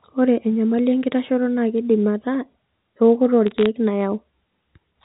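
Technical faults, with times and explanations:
3.47–3.66 s, bit errors on a digital phone line: just after "keidim ataa ewokoto", sharp ticks crackle over the speech. Roughly 0.3 percent of bits on the G.711 A-law line flip, and each hit on a high-order bit, or on the sign of a loud sample, throws one sample far off.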